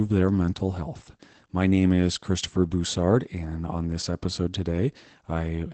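From start to finish the speech sounds muffled and hoarse, with a slightly robotic texture. Nothing is heard above about 8.7 kHz, which takes the air off sibilants. This is Opus voice compression in its SILK linear-prediction mode. The wideband cut and the plainly audible coarseness point to a low bitrate, around 12 kbps. At that rate the excitation signal driving the predictor is coded crudely, so it roughens the voice throughout.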